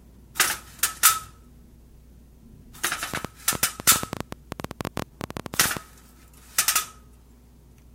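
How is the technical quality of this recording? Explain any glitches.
The recording has one clear fault, a train of clicks. From 3.14 to 5.78 s, sharp pulses tick over the sound at about 12.9 per second, unevenly spaced. There are around forty, peaking well above the sound. The likely cause is electrical interference or a faulty connection or power supply injecting repeated pulses.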